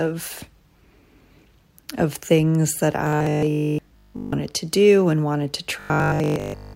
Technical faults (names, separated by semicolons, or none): robotic sound from repeated short buffers